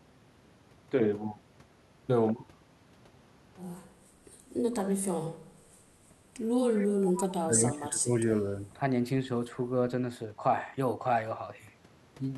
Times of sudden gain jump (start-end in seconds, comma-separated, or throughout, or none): none